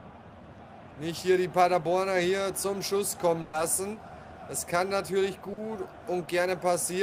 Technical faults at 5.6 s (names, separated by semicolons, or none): short concealed packet loss